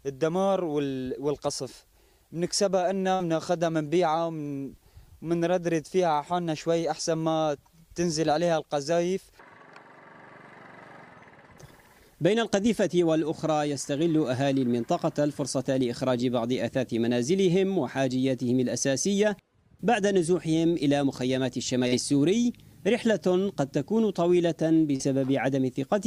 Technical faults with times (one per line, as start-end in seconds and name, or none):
3.15-3.23 short concealed packet loss
21.88-21.95 short concealed packet loss
24.96-25.02 short concealed packet loss